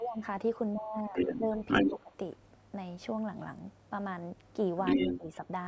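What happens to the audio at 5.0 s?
Around 5.0 s the other side's voice is leaking through. From 4.85 to 5.18 s a second voice sits on top of the talker, a little louder than the speech itself. This is likely residual loudspeaker echo that the echo canceller failed to remove from the microphone signal. On a spectrogram it appears as a second set of harmonic stripes that don't follow the talker's pitch contour. In the waveform the envelope swells where the two voices add together.

Overlapping that, from 4.97 to 5.28 s, the talker's speech is suppressed in double talk. With both sides active, the canceller could not tell the talker from the echo and turned the signal down, likely pulling the speech under as well. Over roughly a fifth of a second in total the level dips in pieces, by around 10 dB at the deepest point. The waveform shows notches carved into the envelope. On the spectrogram, energy drops away patchily below the 8 kHz ceiling of the call path.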